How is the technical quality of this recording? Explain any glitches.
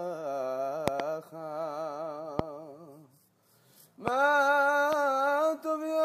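Loud pops mar the recording in four places. At 0.88 to 1.02 s, two pops land close together. Single pops follow at 2.39 to 2.41 s, 4.08 to 4.10 s and 4.93 to 4.95 s. Each rises about 20 dB above the sound, the last about 15 dB. A sudden voltage pulse, likely from a plug, switch or static, is added and then shaped by the following circuits. Each is heard as a sharp thump while the sound continues underneath.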